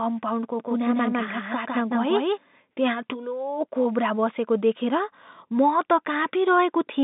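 From 0.60 to 2.38 s, before "त्यहाँ ठुलो कोब्रा बसेको", a doubled audio track appears. An equally loud, dry copy trails roughly 150 ms behind, likely from a slower second capture path.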